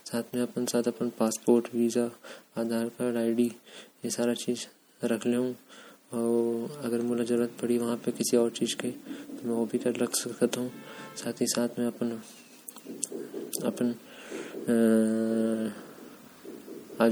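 Speech with plainly audible MP3 compression damage throughout: the upper bands sound watery and swirly as weak spectral lines drop in and out between frames. S sounds chirp metallically and consonant attacks smear. The cause is likely a low bitrate, consistent with about 64 kbps.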